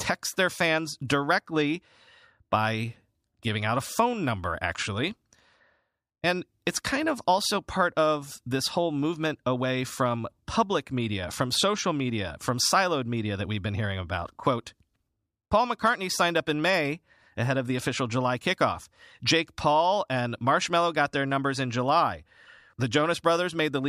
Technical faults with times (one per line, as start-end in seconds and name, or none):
none